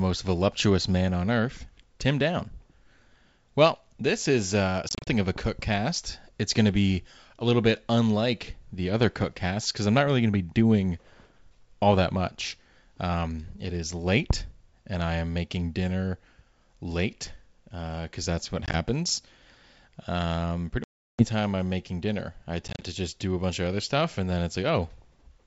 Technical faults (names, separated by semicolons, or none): packet loss on an ADPCM call